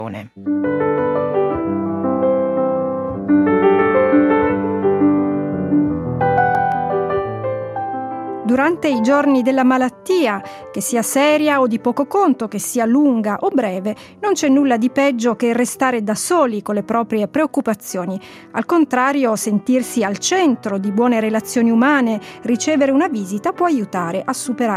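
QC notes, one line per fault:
6.21–6.72 s, CD scratch ticks: a blemish on the disc surface wipes out more data than the player's error correction can reconstruct, and because the damaged spot passes under the laser once per revolution, the loss recurs at a steady rate. The player patches each gap by interpolating or muting, so the sound carries four brief ticks, the longest under a millisecond, spaced about eight per second, which fits one per disc turn.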